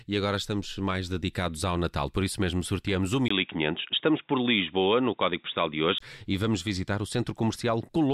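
From 3.28 to 6.00 s the speech turns dull and boxy, with nothing above 3.8 kHz, after a 20 ms silence. This is likely an input switched to a poorer device. A faint new background noise and the gap mark a device change rather than simple filtering.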